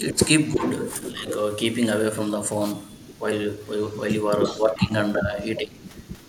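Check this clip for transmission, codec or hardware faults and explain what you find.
The clip has three kinds of fault: echo leak, speech suppressed during double talk, and one wireless microphone noise hit.

Echo leak occurs from 0.12 to 1.35 s, 2.88 to 3.22 s, 3.58 to 4.87 s and 5.56 s to the end. A faint copy of the speech trails 346 ms behind, roughly 10 to 25 dB below it. The likely cause is a far-end loudspeaker whose echo canceller let part of the microphone pickup return.

Speech suppressed in double talk occurs at 0.13 to 0.19 s, 0.55 to 0.64 s, 1.01 to 1.28 s and 4.48 to 5.8 s. The speech dips by roughly 10 to 15 dB. The likely cause is an echo canceller that couldn't separate talker from echo and turned both down.

A wireless microphone noise hit at 2.63 to 2.74 s is heard as a brief swish of static. It comes from an analogue FM radio link fading as reflections cancel, which lets receiver noise rise over the signal.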